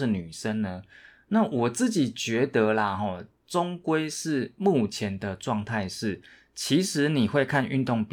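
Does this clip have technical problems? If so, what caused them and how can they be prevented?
No, this clip has no technical problems, so there is nothing to trace back or prevent.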